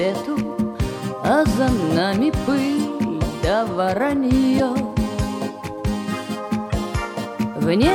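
At 4.58 s and again at 6.70 s, a corrupt frame decoded produces a brief chirp, squeak, blip or burst of noise: damaged compressed data misplaces energy across frequencies for about one or two frames. Unlike a click or dropout, it fills its frame. The first burst peaks near -10 dBFS; the second is quieter, near -25 dBFS.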